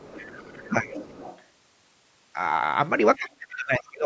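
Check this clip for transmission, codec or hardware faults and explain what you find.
Two faults show up, both tied to echo cancellation on a call. The audio has no content above 8 kHz, which is normal for call microphone processing.

The other side's voice leaks through from 0.0 to 0.7 s, from 0.91 to 1.43 s, and briefly from 3.79 to 3.83 s. It is a faint second voice under the main speech, roughly 20 to 25 dB quieter. The likely cause is a loudspeaker on the talker's device. The far end plays back, reaches the microphone, and the echo canceller leaves some of it behind.

Speech is suppressed in double talk from 0.68 to 0.92 s and from 3.18 to 4.05 s. The talker's level dips by about 10 dB in the first stretch. In the second it drops much further, by about 30 dB. The likely cause is both sides talking at once. The canceller cannot tell its own talker from the echo, so it turns everything down.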